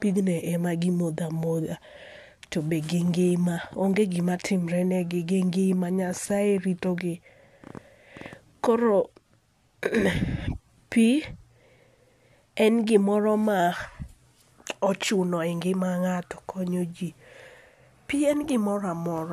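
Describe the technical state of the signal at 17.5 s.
The signal at 17.5 s is intact, with the speech passing through without any audible fault at that moment.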